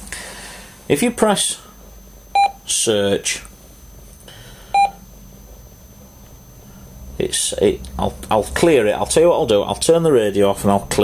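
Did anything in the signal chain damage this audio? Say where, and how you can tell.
Yes. A switching supply whistle sits in the analogue stage throughout. A faint tone wanders between 6.04 and 6.26 kHz, about 35 dB down, from a power supply bursting audibly or beating with another.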